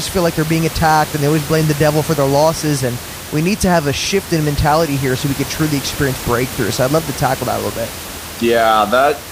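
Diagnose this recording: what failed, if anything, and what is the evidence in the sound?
Nothing failed; only room noise, about 12 dB below speech.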